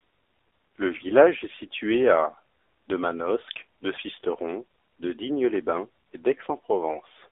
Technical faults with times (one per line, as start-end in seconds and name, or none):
0.00-7.32 AMR narrowband mobile codec
6.90-7.00 AMR bit errors